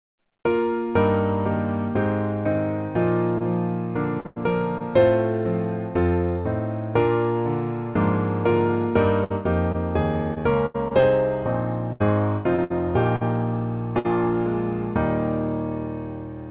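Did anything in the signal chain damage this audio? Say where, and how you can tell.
Yes. At the network stage, short concealed packet loss at 3.38, 4.20 and 4.78 s drops 20 to 40 ms each time. The receiver extends the preceding sound, leaving brief smears or wobbles.

A burst of packet loss at 4.26 to 4.38 s and 13.99 to 14.06 s removes about 100 ms and 60 ms. The last sound is held and faded, then playback resumes further on.

Repeated packet loss (robotic sound) from 9.24 to 11.04 s and 11.92 to 13.23 s comes from recurring gaps up to 81 ms. Each gap is patched by continuation, producing choppy audio with pieces missing.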